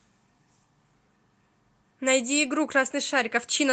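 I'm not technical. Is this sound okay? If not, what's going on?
No. From 2.23 to 2.45 s the speech turns briefly rough and noisy. This is a lost packet rebuilt from error correction: missing audio replaced by a cruder backup copy, so there's no gap.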